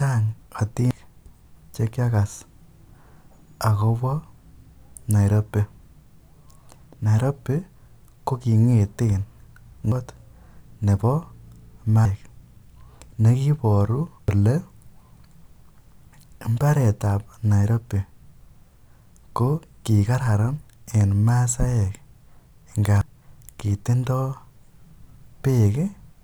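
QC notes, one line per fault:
0.91, 9.92, 12.05, 14.28, 23.01 s: damaged data in a compressed stream. Each time the decoder misreads corrupted frames and resyncs, giving a short chirp, squawk, click or brief hole.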